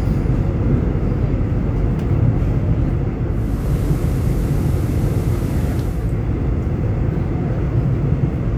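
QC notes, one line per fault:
3.27–6.22 s, digital radio blending to analogue: the receiver lost the digital stream and cross-faded over 487 ms to the station's FM feed, then back. In between, hiss sits roughly 30 dB down, and the level shifts by about 2 dB.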